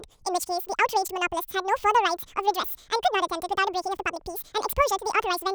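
From the first moment to the end, this speech clip has a wrong sample rate problem: it's running twice as fast and a full octave high, chipmunk-style. That fits audio captured at about 22 kHz being played back at 44.1 kHz with no conversion.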